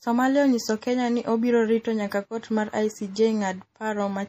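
Throughout the speech, the encoding has likely run short of bits in MP3 compression, consistent with a low bitrate of about 40 kbps. The encoder has cut the treble outright, leaving nothing above 15.2 kHz, and has dropped weak frequency lines that switch on and off from frame to frame. The damage is plainly audible: a watery, swirling texture under the speech, metallic chirps on s sounds, and smeared attacks.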